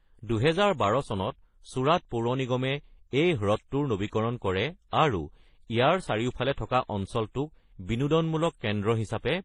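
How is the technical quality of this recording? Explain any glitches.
The quality is limited by one fault throughout the speech: a ceiling at 11 kHz and layered compression artefacts, likely from transcoding between lossy codecs. The sound fits a low-bitrate MP3 followed by HE-AAC near 24 kbit/s, each re-encoding the previous damage and adding its own. The result is the different codec artefacts heard together over a dull top. A spectrogram shows a hard cut-off at 11 kHz with blotchy, speckled high-band texture.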